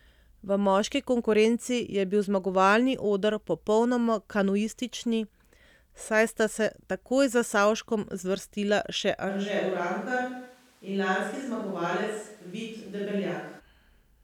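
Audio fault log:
9.31–13.58 s, switch to a distant microphone: after "zvrstila še" the speech abruptly turns hollow, thin and roomy, about 5 dB quieter, likely a farther mic standing in.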